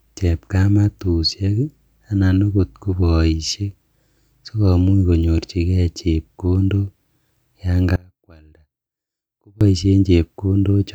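From 7.96 to 9.61 s the speech collapses by about 28 dB, most likely one channel inverted: reversed polarity makes the centred voice cancel when summed to mono. The waveform shrinks to a thin sliver, and the spectrogram goes faint.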